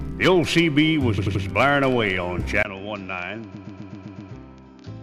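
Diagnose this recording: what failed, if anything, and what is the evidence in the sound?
Repeated frames at the codec or storage stage: an 85.3 ms block stutters from 1.17 to 1.43 s, and a 128 ms block loops from 3.54 to 4.31 s. These are exact replays rather than gaps.

Input switched to a poorer device, likely at the driver: at 2.63 s a 20 ms silence precedes audio cut above 7 kHz, about 10 dB quieter, with its own noise floor. A codec band-limit wouldn't change level or noise.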